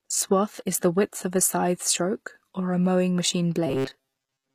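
Throughout the clip the treble has a gritty, metallic, lispy quality, and s sounds come out smeared rather than crisp. This is likely HE-AAC compression at a low bitrate, around 24 kbps. The codec keeps only the lower spectrum and synthesises the upper bands by copying lower material upward under a coarse envelope, so the rebuilt treble's harmonics don't match the real ones.

From 3.67 s, just after "or a mowing machine", to the end of the clip, the speech turns into a rigid mechanical buzz pitched at 134 Hz, still loosely following the syllables. This is robotic sound from repeated short buffers, likely caused by audio arriving too slowly. The playback loops a fragment of about 7.5 ms, which sets the fixed buzz pitch. Most of the real audio in that stretch, roughly two thirds or more, is replaced by these repeats.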